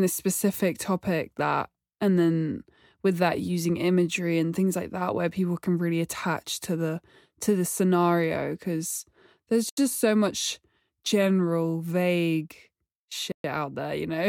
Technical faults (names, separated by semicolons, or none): Bluetooth stall